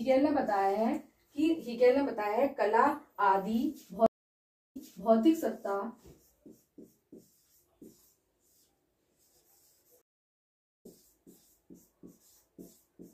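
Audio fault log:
4.06 to 5.13 s, stream reconnect: the sound drops out for about 675 ms, then comes back 392 ms earlier than where it left off, so you hear a short stretch again. That's the connection breaking, the player going quiet, reconnecting and spinning up a fresh decoder, with the server resending a burst it had already sent.
10.02 to 10.86 s, stream reconnect: same story, with about 818 ms of silence, but this time it resumes around 0.4 s later, so a bit of the stream is just gone, as you'd expect from picking a live feed back up at its current point.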